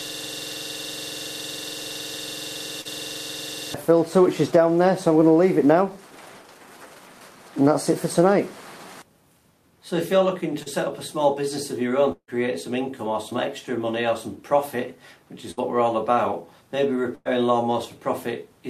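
From the very start until 3.74 s, a system hang loop is already under way. The playback path stopped feeding fresh audio, and the hardware kept replaying one 46.44 ms stretch, which fits a 2048-sample buffer. It repeats 80 times at 21.5 per second, a rapid, rattling stutter close to a buzz.

Short concealed packet loss appears at 2.81 to 2.87 s, inside the loop, then at 10.63 to 10.68 s. About 40 ms of data arrived too late each time, and the receiver extended the preceding sound to bridge it. Each gap is a brief smear or wobble before the audio blends back in.

From 12.12 to 12.30 s, the sound smears into a continuation that fades and then drops to a short silence before the audio returns further on. Around 160 ms of material is simply gone, likely from a long network dropout.

A third short concealed packet loss at 13.30 to 13.33 s covers only about 20 ms and leaves a brief smear or wobble.

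Bursts of packet loss follow at 15.51 to 15.59 s and 17.15 to 17.27 s. Several consecutive packets went missing, about 60 ms and then 100 ms. The receiver held the last sound and faded it, producing a short buzz or hiss. The second burst ends in a moment of silence, and both resume with the intervening audio skipped.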